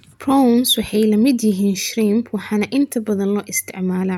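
Nothing goes wrong anywhere in this bit of speech, so there's no technical fault to point out.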